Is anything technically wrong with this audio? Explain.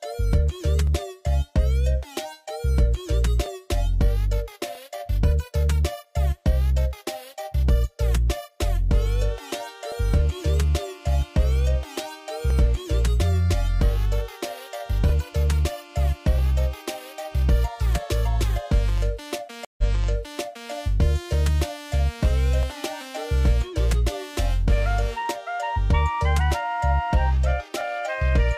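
Yes, there are two faults.

Clock drift buffer slips: the two devices likely run on clocks that disagree by roughly 1000 ppm, so the buffer between them drifts until a block of about 50 samples is dropped or repeated. This produces a regular click every 1.29 s, around twenty times from 0.87 s to 27.81 s.

Stream reconnect: between 19.65 s and 20.71 s the connection dropped and the player rejoined with a fresh decoder. The audio goes silent for 133 ms, then resumes 929 ms earlier than where it stopped, so that stretch plays a second time.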